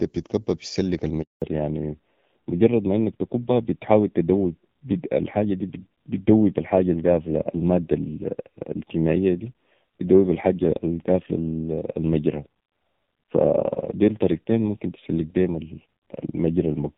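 It's a speech recording, and it goes wrong early. At 1.22 s there's a handover gap: the call is passed from one network to another, and for 200 ms, up to 1.42 s, no speech frames make it through. The voice fades out within a few tens of milliseconds and sits in silence until the new link picks up, so whatever was said in that stretch is simply gone. Right after that, from 1.42 s to the end, you get a fallback to narrowband. Before the switch the call sounds like HD Voice, with the AMR-WB codec carrying content well up past 4 kHz and only light coding damage. Once the new link is up, nothing above 4 kHz is left. The voice sounds muffled and telephone-like, with a grainy, rough edge, which fits an older narrowband AMR codec running at a low rate, somewhere around 5.9 kbit/s.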